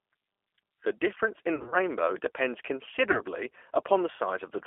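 A speech recording heard through the G.729 codec, G.729A at 8 kbit/s. The band is held to roughly 300 to 3400 Hz, so nothing above about 3.4 kHz comes through. The codec damage is plainly audible. The voice sounds rough and slightly synthetic, because it is rebuilt from a vocal tract filter, a pitch predictor and a few pulses per frame rather than the actual waveform. VoIP packet loss concealed by the speech codec occurs twice. From 1.56 to 1.76 s, just after "difference in", about 100 ms of audio is missing, scattered over 160 ms, with the longest gap 40 ms. That fits about five lost packets. The decoder fills each gap by repeating its last pitch and filter at falling gain. This smears the sound into a buzzy tone or a coloured noise that fades. A second loss at 3.12 to 3.22 s removes 20 ms, which points to a single lost packet. Each frame builds on the last, so the voice stays weak or distorted for tens of milliseconds or more after the gap.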